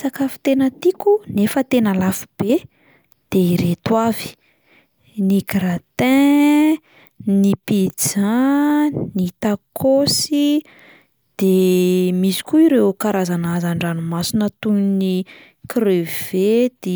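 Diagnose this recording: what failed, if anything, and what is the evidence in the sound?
No fault found in this recording.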